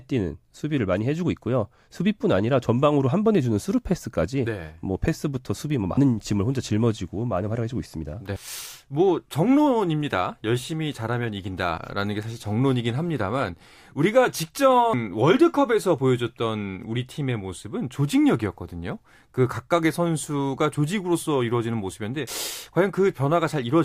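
At 5.97, 8.36, 11.78, 14.93 and 22.27 s the speech jumps ahead with no gap, likely a dropped buffer (overrun), losing about a tenth of a second at 5.97, 11.78 and 22.27 s and around 300 ms at the other two. Each shows as an abrupt waveform discontinuity and a thin vertical spectrogram line.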